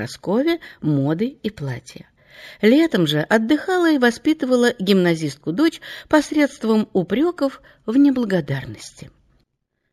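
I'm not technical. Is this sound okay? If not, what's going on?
No. Throughout the clip there is imaging from linear upsampling. The sound was raised to a higher rate by joining samples with straight lines, which fits a 16 kHz source raised to 48 kHz. This dulls the top end and leaves faint mirrored copies between 8 and 16 kHz, heard as a light metallic shimmer.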